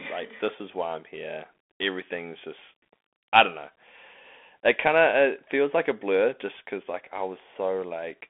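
From start to finish the speech carries a Bluetooth CVSD headset codec sound, which fits a 64 kbps CVSD link. The band is squeezed to roughly 250 Hz to 3.5 kHz, so there's no low body and no air up top. CVSD sends just one up-or-down bit per sample with an adapting step, so loud bright moments outrun the step and smear. The s sounds come out scratchy, and a grainy hiss sits under everything.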